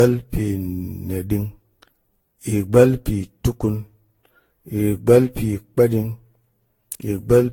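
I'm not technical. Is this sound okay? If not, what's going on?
No. Generation loss runs through the whole clip. The speech sounds swirly, hollow and smeared, with the sharp starts of sounds blurred. It was likely compressed and re-saved around fifteen times, each pass adding its own small damage until it piles up.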